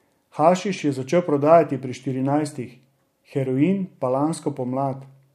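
No technical faults can be heard anywhere in the recording, and the signal holds steady throughout.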